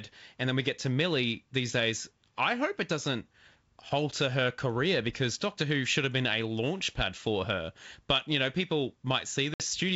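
At 9.54 s, right after "you know people", there's packet loss on the ADPCM call: about 60 ms, a few packets' worth, drops out as a hard silent gap. The decoder's predictor and step size lose sync with the sender, so the G.722 speech comes back at 9.61 s with brief, slight distortion.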